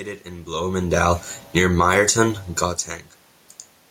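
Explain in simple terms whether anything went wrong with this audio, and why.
At about 1.4 seconds the sound, including its background, starts sinking, growing quieter over roughly half a second until about 1.9 seconds. This is automatic gain falling. The recording system has a built-in volume control that adjusts itself, and here it decided the incoming sound was too loud or too noisy and gradually turned itself down. Because it lowers everything together, the room noise drops along with the speech.

Almost immediately, from about 1.8 to 2.5 seconds, the level swells back up, speech and background rising together. This is automatic gain rising. Just as the control finished turning down, the sound reaching the microphone became much quieter, so the control reversed course and slowly turned itself back up by the same amount. The result is a dip in volume that comes from the equipment, and the rise wins back only part of the much quieter sound.

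The background room noise and the talker shifting position near 0.5 and 2.5 seconds are ordinary parts of the recording rather than faults.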